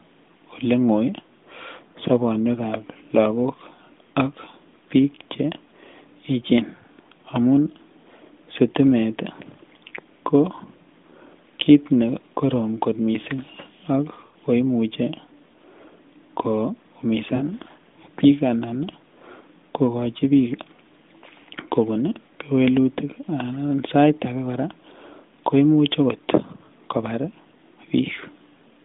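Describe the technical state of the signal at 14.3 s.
Lost AMR speech frames: between 14.26 and 14.35 s, after "korom kot mising ak", about 80 ms of radio frames failed their checks, which fits four 20 ms frames. The decoder reused the last good pitch and vocal-tract settings with falling gain, so the sound drags out and fades before "ko imuche" resumes.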